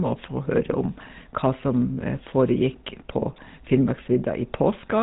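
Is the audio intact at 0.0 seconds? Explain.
No. The GSM full-rate codec is audible from 0.0 s and throughout: the vocal tract is modelled and driven by regularly spaced pulses, giving a plainly buzzy, gravelly roughness, consistent with a 13 kbps stream, and nothing above 3.8 kHz survives.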